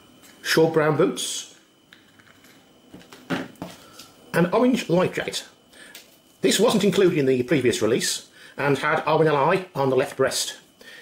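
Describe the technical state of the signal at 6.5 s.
At 6.5 s the signal sits inside a time-stretched section that runs from 2.92 s to the end of the audio. The likely cause is software squeezing this stretch to fit a shorter length, playing it about 1.44 times faster while holding pitch by discarding short slices and joining what remains. The pace jumps abruptly at 2.92 s and stays hurried, with no shift in pitch, and the sound is rushed.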